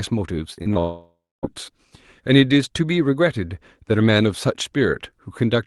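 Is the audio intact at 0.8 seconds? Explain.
No, 0.8 s falls inside a long network dropout running from about 0.79 to 1.45 s. It sounds like nothing new arrived for that whole stretch, most likely because the network stopped delivering packets. The decoder kept stretching the last bit of sound into a buzzy, hissy continuation that fades away, then there's a good chunk of near-silence, around 270 ms of it, before real audio picks up again with the missing part simply gone.

It's also worth knowing that right before this, from about 0.73 to 0.77 s, there's a short concealed packet loss. Roughly 20 ms never made it in time, so the receiver papered over it by extending the preceding sound and blending back. You hear it as a quick smear or wobble, and it leads straight into the bigger gap.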